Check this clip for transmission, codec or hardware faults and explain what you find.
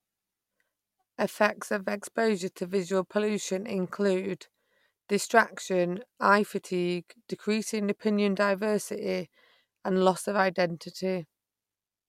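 No transmission, codec or hardware faults can be heard in the speech. There is nothing here that calls for an explanation.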